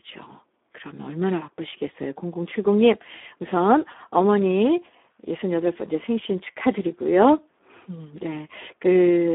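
Speech throughout carries heavy Speex codec damage. Starved of bits for the excitation, the voice sounds hoarse and noisy, which fits a low setting near 8 kbps. The band runs from about 250 Hz to 3.6 kHz, with nothing above 3.8 kHz.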